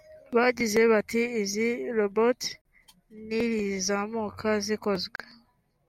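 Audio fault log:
2.61 s and 5.16 s, gap at a join of encoded pieces: the speech drops to silence for about 38 ms and 40 ms, then resumes where it stopped. Separately encoded pieces were joined with their start delay and end padding left in. The waveform shows a flat notch with smeared edges, and the spectrogram shows a thin vertical blank band.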